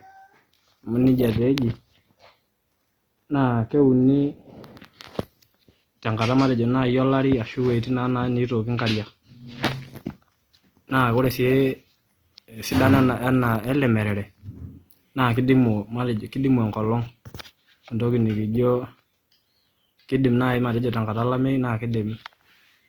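Throughout the speech, harmonics sound rough and grainy, likely from Opus compression at a low bitrate, around 24 kbps. Bands are filled with noise rather than left empty, so a spectrogram shows energy up to about 20.2 kHz but smeared, speckled harmonic detail.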